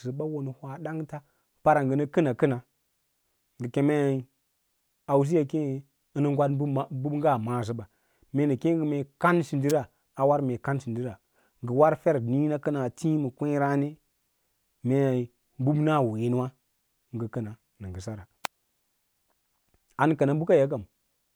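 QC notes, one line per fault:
9.70 s: electrical switching spike, a sharp snap peaking around -10 dBFS just before "a war mee", likely an arc from a nearby switch or motor picked up by the audio line.
18.45 s: electrical switching spike, a brief, louder snap near -5 dBFS sitting on top of the speech, likely a nearby switching arc or static discharge coupling into the line.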